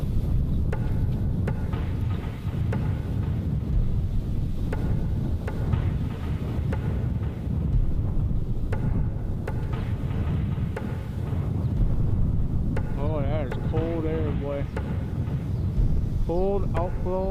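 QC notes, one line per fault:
10.17–10.22 s, repeated frames: a brief stutter, as a 40 ms stretch of sound plays a second time. A run of compressed frames, which fits two frames, was sent twice, adding 40 ms to the audio.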